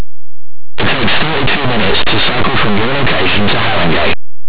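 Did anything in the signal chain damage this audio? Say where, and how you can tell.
Yes: harsh, very loud distortion covers the entire speech clip. This is linear audio read as companded at the sample-format conversion stage: plain 8-bit samples were expanded as mu-law codes, so values just on one side of zero became huge while those on the other side stayed small.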